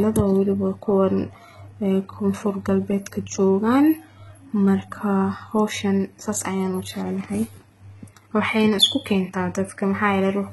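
Speech clip with heavy HE-AAC compression throughout: s sounds come out gritty and lispy. The likely cause is spectral band replication copying lower bands upward at a very low bitrate, around 16 kbps, so a spectrogram shows smeared, repeated treble whose harmonics misalign above the crossover.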